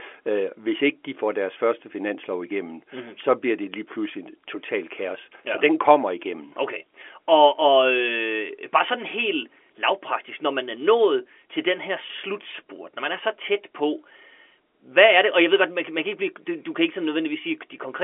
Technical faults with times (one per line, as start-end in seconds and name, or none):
none